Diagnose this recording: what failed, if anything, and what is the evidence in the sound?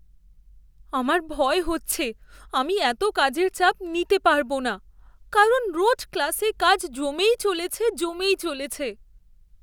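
Nothing in the chain appears to have failed, and the speech recording carries no audible technical defect at any stage from capture through to playback.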